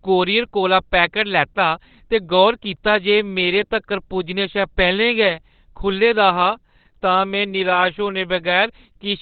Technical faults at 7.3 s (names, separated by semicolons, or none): Opus compression